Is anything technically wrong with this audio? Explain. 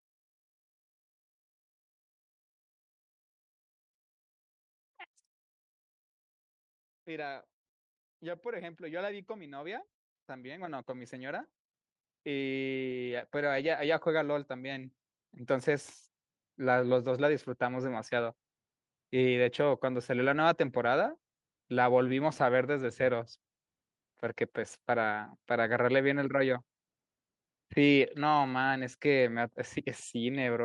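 Yes. Automatic gain rising, from 7.04 s to 18.05 s: the gain control judged the input too quiet and kept raising its gain, by about 18 dB in all. The voice and the background noise swell together across those eleven seconds instead of holding a steady level.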